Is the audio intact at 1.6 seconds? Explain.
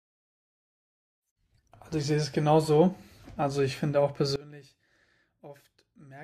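Yes, at 1.6 seconds the speech plays through intact, with no dropout, click, distortion or other fault at that moment.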